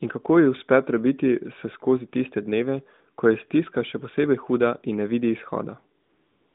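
From 6.02 s to 6.55 s, the real background gives way to a smooth, steady hiss. This is AMR comfort noise: the phone stopped sending speech frames, so the receiver synthesised filler noise.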